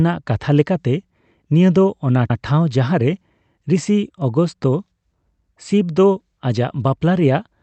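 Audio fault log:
2.30 and 5.40 s: overlapping chunks. At each of these points about 100 ms of the speech plays a second time, heard as a brief stutter, as if the talker jumped back a fraction of a syllable. The audio was handled in blocks of about 3 s, and each new block began before the previous one had finished, so the overlapping stretch at every join was played twice instead of being crossfaded or trimmed away.
Throughout: the call path is working normally. The Opus coding, at a bitrate that fits about 40 kbps, leaves its usual coding noise, and its bandwidth limit removes content above about 8 kHz.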